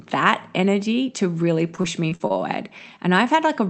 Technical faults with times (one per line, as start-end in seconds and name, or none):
1.75-2.32 repeated packet loss (robotic sound)